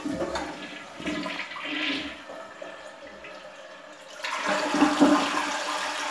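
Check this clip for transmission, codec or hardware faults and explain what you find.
No transmission, codec or hardware faults can be heard anywhere in this recording of everyday sounds, and the signal stays continuous and stable throughout.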